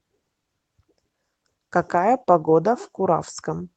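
From 0.85 to 1.59 s the speech suddenly sounds hurried. That's a jitter buffer speed-up: with too much backlog queued, the receiver snipped out short pitch-period chunks, roughly a tenth of a second overall, so it plays at 112% speed with unchanged pitch.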